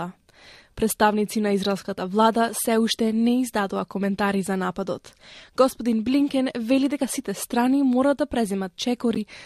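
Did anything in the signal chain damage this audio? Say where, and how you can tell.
Yes. At the codec stage, a corrupt frame was decoded near the end: a couple of damaged frames played anyway, causing a brief, loud burst of misplaced energy from 9.15 to 9.17 s.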